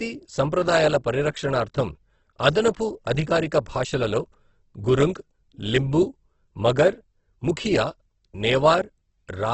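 Throughout, the speech carries heavy codec damage, likely Opus compression in its CELT mode, at a rate that fits around 12 kbps. Nothing survives above 8.2 kHz, and bit-starved bands get refilled with folded or noise content, so the whole clip sounds grainy and rough.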